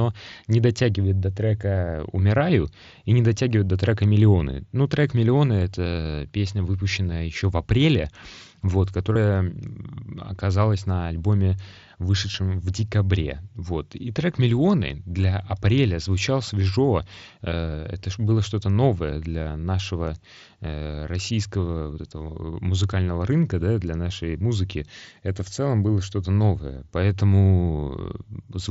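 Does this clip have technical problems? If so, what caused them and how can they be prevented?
Yes. Concealed Bluetooth headset packet loss at 9.13–9.16 s, after "еще в апреле вот", and 12.31–12.34 s, before "в декабре": about 23 and 30 ms of lost packets are filled with repeated recent waveform, leaving brief buzzy patches. Keep the phone close and away from 2.4 GHz interference.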